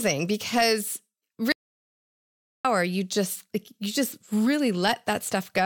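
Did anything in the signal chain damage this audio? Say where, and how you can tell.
Yes. There's an audio dropout to silence from 1.52 to 2.65 s, just before "you just you just": the speech cuts out mid-flow and the gap is silent, no room tone at all. That points to the input path, likely a lost device link or mute while the recorder kept writing silence, so about 1.1 s is simply gone.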